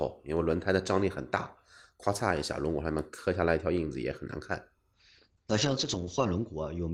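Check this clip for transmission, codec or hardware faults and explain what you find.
One transmission fault is present. A call bitrate drop starts at 4.95 s and lasts to the end. The bandwidth estimate fell, so the encoder coded more coarsely. The treble above 8 kHz vanishes, consistent with a fall from about 32 to 8 kbps, and the speech turns rough and muffled.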